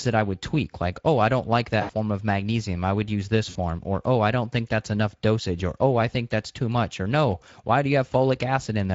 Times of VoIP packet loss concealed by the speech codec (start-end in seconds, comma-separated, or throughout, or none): 1.81-1.91, 3.49-3.57